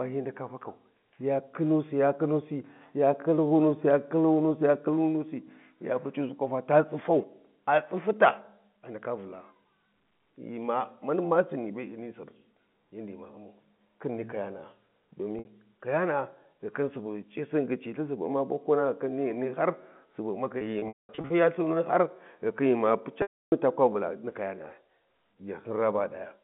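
Packet loss with pitch repetition hits at 15.39 s (60 ms, a brief buzzy hold), from 20.58 to 21.30 s (360 ms scattered, longest gap 210 ms), and from 23.22 to 23.52 s before "ta kwa", where the looped pitch period fades to silence and appears as repeated identical waveform cycles and flat, comb-like harmonics on a spectrogram.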